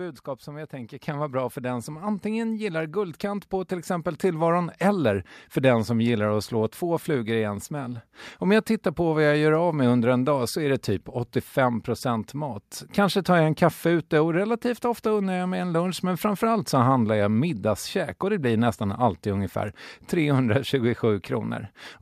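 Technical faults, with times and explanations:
1.02 s, microphone volume stepped up: between "som jag tänker" and "vara bra för den", the input gain rises about 6 dB in one step, so speech and background noise get louder together. The waveform envelope jumps abruptly, and the spectrogram brightens evenly across all frequencies.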